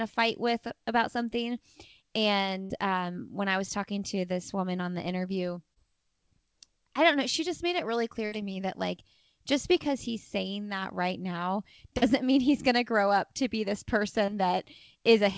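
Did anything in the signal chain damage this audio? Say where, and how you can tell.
Yes, at the network. A burst of packet loss at 2.62–2.72 s and 8.26–8.34 s is concealed as a held buzz or fading hiss. The spectrogram shows smeared, decaying energy, then a jump forward.

Short concealed packet loss at 5.74–5.78 s, 11.98–12.04 s and 14.26–14.30 s leaves brief smears of 20 to 40 ms where the receiver extrapolated. They show as blurred slivers in the waveform, within a band that stops at 8 kHz.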